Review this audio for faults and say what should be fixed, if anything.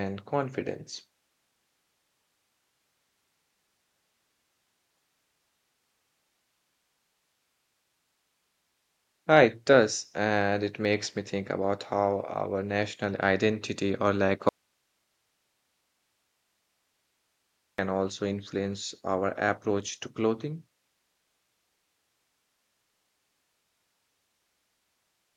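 There's an audio dropout to a faint residue from 14.49 to 17.78 s, about 3.3 s where the speech vanishes abruptly and only hiss remains, roughly 50 dB down, so the chain stayed live but likely lost its feed. Check and secure that source connection before recording.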